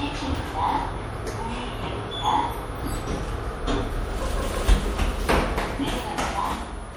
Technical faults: MP3 compression

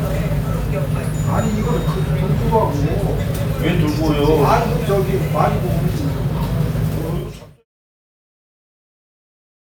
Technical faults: none

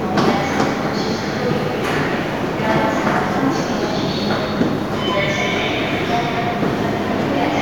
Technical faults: none

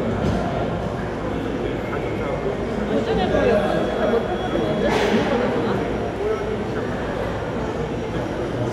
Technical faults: none

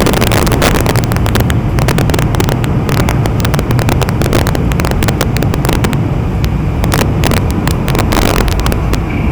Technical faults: integer overflow

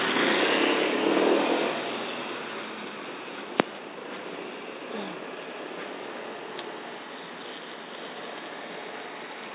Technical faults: none

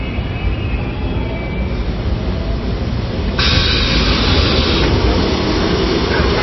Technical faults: MP3 compression

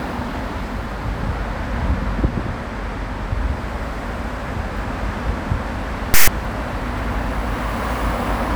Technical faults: file tags played as audio

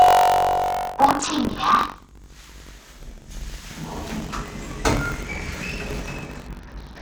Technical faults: buffer tearing; Bluetooth SBC bit pool drop

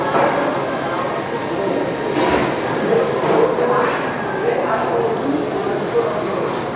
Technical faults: none

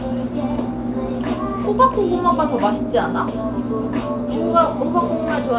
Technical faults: none

